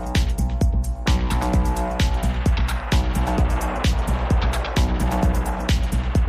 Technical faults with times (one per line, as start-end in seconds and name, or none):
none